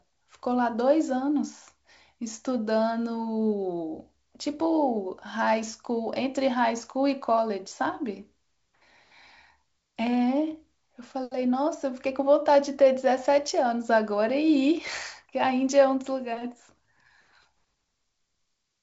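No technical faults turn up in this speech, which comes over G.722 wideband telephone coding at 64 kbit/s.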